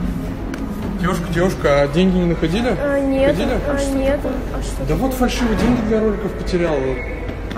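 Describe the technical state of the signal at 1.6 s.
At 1.6 s the signal is intact, with no dropout, distortion, glitch or other technical fault audible at that point.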